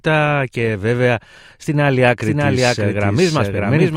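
Speech, and from about 2.22 s, right after "και βέβαια στην άλλη", it picks up a doubled audio track that runs to the end. A second full-band copy of the same speech trails the original by around 0.7 s at roughly the same level. It cuts in abruptly and has no decay or room colour, so it sounds like a clean duplicate rather than an echo. The likely cause is the signal being captured twice, once through a slower path.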